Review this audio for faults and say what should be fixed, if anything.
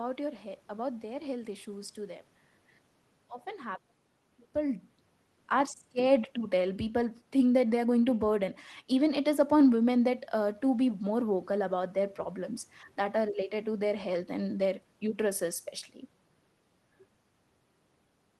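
Nothing stood out on listening to this speech recording, so there is nothing that calls for a fix.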